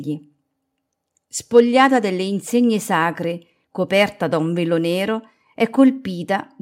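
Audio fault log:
Nothing to log here, since no faults turn up anywhere in this bit of speech.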